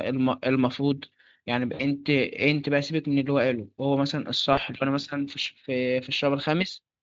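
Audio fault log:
1.73–1.84 s and 4.53–4.60 s, VoIP packet loss concealed by the speech codec: roughly 60 ms and 40 ms of audio are missing. The decoder extends the previous frame into a buzzy tone or coloured noise that fades, and the signal stays thin briefly afterward.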